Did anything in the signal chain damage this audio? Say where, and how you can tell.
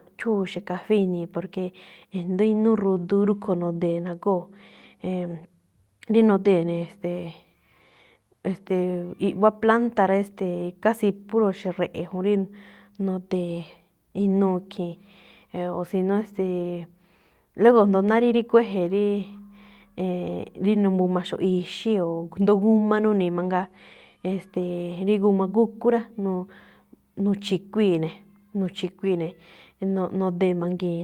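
No, nothing along the chain seems to have damaged this speech recording, so there's no stage to point to and no evidence of harm to report.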